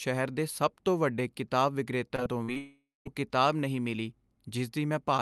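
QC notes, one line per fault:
2.07–2.58 s, repeated packet loss (robotic sound): Just after "ਸਭ ਤੋਂ ਵੱਡੇ ਕਿਤਾਬ" the speech turns choppy and robotic. Five short holes open in quick succession, the longest 44 ms, and together they remove about 120 ms of audio. Each hole is filled by extending the preceding sound, so roughly a quarter of this half-second is concealed rather than real speech. That repeated patching produces the robotic texture and missing fragments.
2.58–3.07 s, long network dropout: Immediately after the choppy stretch, the speech stops for about half a second, roughly 480 ms. The last sound is stretched into a fading buzz or hiss, and the final 190 ms or so is silence. Speech resumes at "ਕਿਤਾਬ ਨਹੀਂ ਮਿਲੀ" with the intervening portion simply gone. This is likely a network outage during which no audio reached the receiver, and the concealment ran out and faded to silence before delivery recovered.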